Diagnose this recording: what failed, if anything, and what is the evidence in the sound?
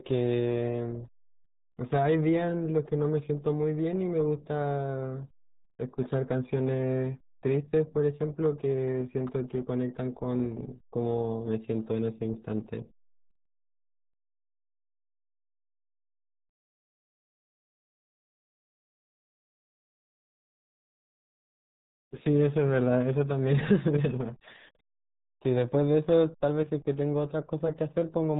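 The failure is at the codec stage: heavy RealAudio 14.4 coding runs through the whole speech clip. Nothing passes above 3.8 kHz, and the speech is muffled and gargly throughout, which fits a very low bitrate around 8 kbit/s designed for dial-up modems.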